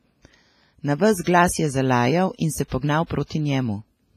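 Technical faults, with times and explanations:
Throughout, WMA compression: the whole clip has a ringing, washy quality, with a hiss that swells and fades with the speech, and nothing is present above 15.5 kHz. The damage is heavy. The likely cause is an early Windows Media Audio encoder at a low bitrate, something like 24 kbps. Its long transform blocks smear quantisation noise across tens of milliseconds and zero out weaker spectral detail.
1.24 to 1.27 s, 2.68 to 2.72 s and 3.06 to 3.10 s, pre-echo: a short burst of hiss arrives just ahead of three sharp onsets in the speech, lasting about 29, 39 and 36 ms, and each attack sounds softened and smeared. The codec spreads the noise it allows for a loud block evenly across that whole block. When an attack lands late in the block, noise sized for the loud part fills the quiet moment before it.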